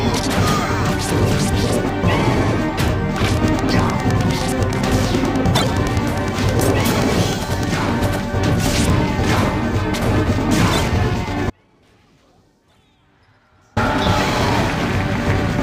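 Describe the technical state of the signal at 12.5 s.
At 12.5 s the signal sits inside an audio dropout to a faint residue from 11.50 to 13.77 s, likely a signal loss while the downstream path stayed live. Only a faint leak remains, roughly 40 dB down, showing as an abrupt waveform collapse and a near-blank spectrogram band.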